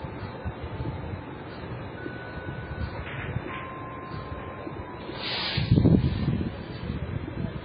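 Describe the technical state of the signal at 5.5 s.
At 5.5 s, as throughout the clip, the sound shows transcoding between lossy codecs, with nothing above 5 kHz. The mixed artefacts set it apart from a single low-bitrate pass: smeared, swirly grit sits alongside a second layer of warbly coding noise. This most likely points to a very low-rate MP3 re-encoded to AAC-LC, with the later codec spending bits on the earlier damage while keeping its low cut-off.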